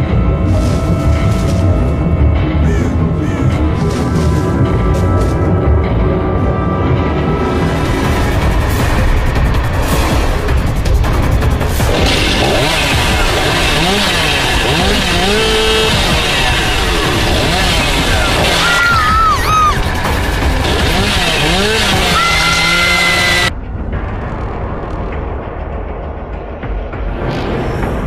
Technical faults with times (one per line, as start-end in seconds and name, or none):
none